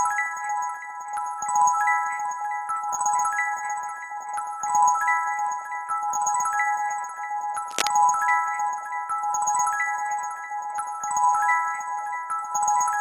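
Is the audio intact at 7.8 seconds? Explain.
No. Cable scratch noise covers 7.8 seconds, running from about 7.71 to 7.93 s. The likely cause is a worn cable, connector or control being moved, so its contact resistance jumps around rapidly and injects dense, irregular bursts of noise into the signal. For roughly a fifth of a second a scratchy, rustling crackle sits over the sound, loud enough to rival it at about 5 dB below the signal level.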